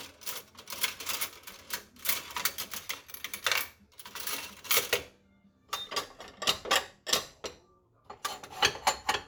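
No technical faults are audible.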